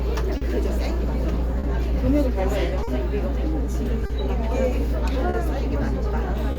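Clock drift between sender and receiver runs through the whole recording of everyday sounds. The sender's audio clock runs slow by roughly 3 percent, so the receiver plays samples faster than they arrive and its jitter buffer keeps draining. The drift itself brings small timing hiccups all through the clip, and each time the buffer empties the result is audible as a short stall.

A short stall from a late packet follows at 0.37, 1.59, 2.83, 4.06, 5.30 and 6.52 s, about every 1.2 s. Each time the next packet is not ready when due, so the receiver stretches the last sound by about 40 ms and then resumes from the same point, with nothing lost. The result is a brief held or smeared moment with a faint buzz or dip. Each stall also adds about 40 ms of delay.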